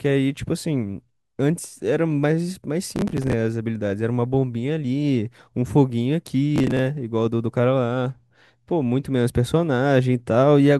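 At 2.96 to 3.33 s and again at 6.56 to 6.79 s the speech picks up a gritty burst of processor overload crackle. The processor keeps missing buffer deadlines (buffers of around 10 ms), replaying stale audio with hard edges each time, so the speech tears until the load eases.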